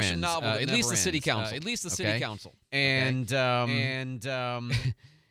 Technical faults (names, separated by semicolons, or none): doubled audio track